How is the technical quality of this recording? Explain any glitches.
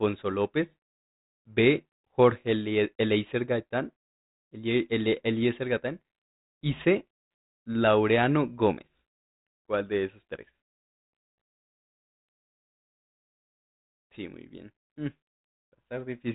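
Nothing stood out on listening to this speech, which comes through a G.726 ADPCM telephone path at 40 kbit/s, so the sound stops at about 3.8 kHz and any coding hiss is faint at most.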